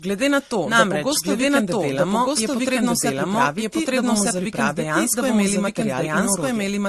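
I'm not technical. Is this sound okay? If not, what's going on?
No. Two things went wrong, and both run through the whole recording.

The first is a doubled audio track. Most likely the speech was picked up twice, or an edit left two copies sitting out of step. The result is a second copy of the speech, about as loud as the first, trailing roughly a second behind. It sounds like someone repeating every phrase a beat later. It isn't a room echo: the copy doesn't fade or sound distant.

The second is transcoding between lossy codecs. The recording was likely squeezed by one compression format, MP3, and then squeezed again by another, Opus. Each round throws detail away, and the second round also damages what the first left behind. Nothing above about 12.2 kHz survives, and the damage from both formats is heard at once.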